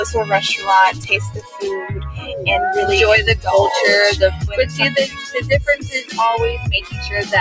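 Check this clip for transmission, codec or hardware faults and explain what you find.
A speech-oriented noise suppressor is processing non-speech sound, and it pulls parts of it down at five points. The band stops at 8 kHz, as expected from call microphone processing.

Throughout, the sound pumps and thins. Sustained material and tails keep sinking while onsets come through, with a level swing of around ten decibels. This is a noise suppressor applied to music or sounds: it mistakes steady content for background noise and attenuates it.

At 0.92–1.1 s, 1.3–1.63 s, 2.15–2.3 s, 5.08–5.37 s and 5.76–6.18 s, the sound is cut by the noise suppressor. Held or decaying parts drop by about 9, 14, 7, 8 and 13 dB respectively and then recover. The suppressor briefly judged these passages to be noise and clamped them harder than the surrounding audio.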